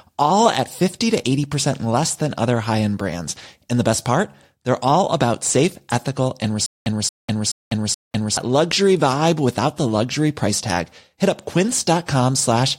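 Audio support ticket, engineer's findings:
Stutter with silent gaps, 6.66 to 8.37 s, right after "about safe ethical and" and before "luxury vibe without the". A 228 ms burst replays 4 times, each followed by about 199 ms of dead digital silence, so a steady 427 ms cycle. Likely a stalled player or stream re-serving its last buffered chunk on each retry and then running dry. Audio from that stretch is gone.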